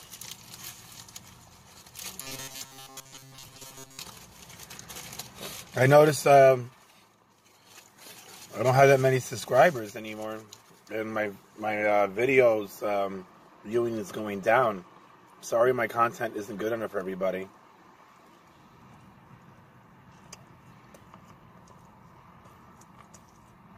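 From 2.21 to 3.99 s, new audio was likely arriving too seldom, so the playback kept repeating a short buffer of about 7.5 ms for most of that stretch. The result is robotic sound from repeated short buffers: a rigid, metallic buzz locked at 134 Hz.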